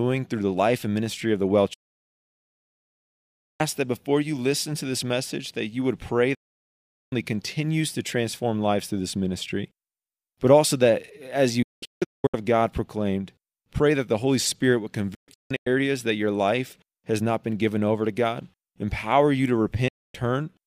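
The speech snaps to silence with a very quick fade of about 8 ms. It goes silent from 1.74 to 3.61 s and returns on "that before you listen". It cuts again after "that you would pray" from 6.34 to 7.13 s and resumes at "continues to transform lives". From 11.62 to 12.34 s and from 15.14 to 15.67 s it breaks into several short holes, the longest about 0.19 s and 0.16 s. The last cut follows "empower you to", from 19.88 to 20.15 s. This is a digital broadcast dropout: the receiver muted whenever frames were lost or corrupted, so that stretch of programme is gone. The gap lengths fit 32 ms frames.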